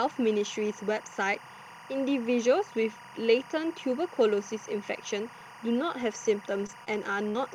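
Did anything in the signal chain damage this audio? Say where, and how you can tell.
Yes. Timecode bleed sits under the speech for the whole clip, a chirping warble about 20 dB below it that flips between tones near 1 and 2 kHz. Its rhythm fits 23.976-frame linear timecode coupling in through analogue wiring or a neighbouring track.

Scattered short gaps come from the network stage between 6.01 and 7.37 s. About three brief holes, the longest roughly 70 ms, leave ticks and smeared hiccups. The receiver lost about 100 ms of packets and bridged them with 120 ms of continued sound.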